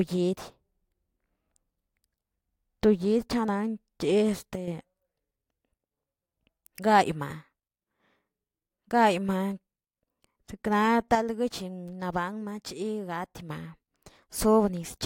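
At 4.56 s the level drops abruptly by about 7 dB until 4.68 s, and from 11.15 s to 13.49 s it drops by about 6 dB. Speech and background noise fall together, a sudden gain jump, likely an unramped digital gain change.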